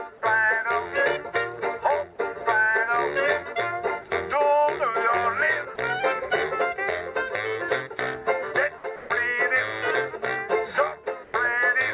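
At 5.76 to 5.78 s, a brief 20 ms patch of flat, steady hiss replaces the sound, and about 10 ms of the actual sound is lost before it resumes. This is sound dropped by the voice detector: the sender most likely judged a quiet stretch to be background and briefly stopped transmitting, so the receiver filled the gap with comfort noise until the detector triggered again.

At 8.96 to 9.10 s, the background, which sits about 24 dB below the loudest sound, turns into a featureless hiss for 140 ms and rises about 4 dB. At 11.24 to 11.34 s, the same thing happens for 100 ms against a background about 21 dB down, this time dropping about 6 dB. Both are comfort noise in place of the background. The sender likely paused transmission during these quiet moments, and the receiver synthesised noise roughly matched to the background, so the real background detail disappears and the level jumps at each edge.

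Throughout the clip, nothing is audible above 4 kHz. That band limit fits G.711 A-law at 64 kbps on the call path.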